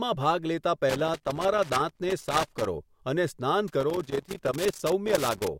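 An irregular burst of crackle and scratching breaks into the speech from 0.90 to 2.67 s, then returns from 3.68 to 5.48 s. Both stretches are loose connector crackle: a worn or dirty contact somewhere in the cable path keeps making and breaking as it shifts, so the signal is chopped on and off in rapid, uneven bursts. Any DC present on the line adds pops each time the contact snaps back.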